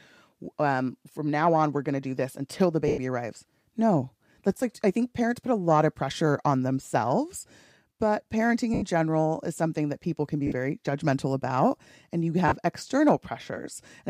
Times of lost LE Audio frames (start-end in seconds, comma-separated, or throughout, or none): 2.88-2.98, 8.74-8.82, 10.47-10.52, 12.48-12.52